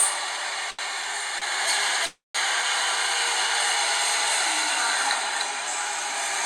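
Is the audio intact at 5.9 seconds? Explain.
Yes, at 5.9 seconds the sound plays through intact, with no dropout, glitch or other fault at that moment.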